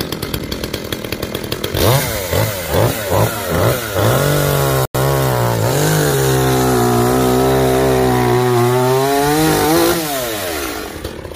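At 0.39 s there's a tiny block of digital silence, heard as a tick. At 4.85 to 4.95 s, a roughly 93 ms one makes a short hole, which fits a 4096-sample buffer left unfilled. Both cut abruptly.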